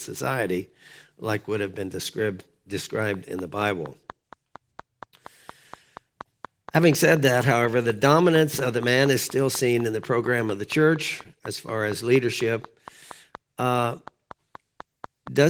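From 3.14 s to 15.28 s a train of clicks runs through the speech: regular, similarly shaped pulses at 4.2 per second, around fifty in all, peaking a few dB above the speech and ticking through pauses too, likely interference from nearby equipment.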